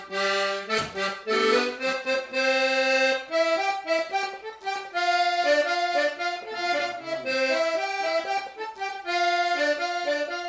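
No technical faults are audible.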